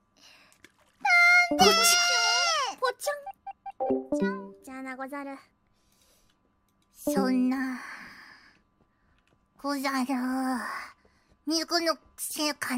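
No technical faults can be heard anywhere in the audio, and the signal holds steady from the first moment to the last.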